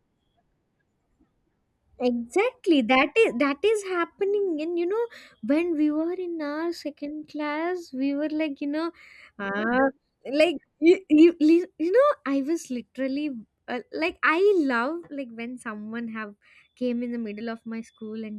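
Listening through the speech, nothing stood out as a technical problem at any point.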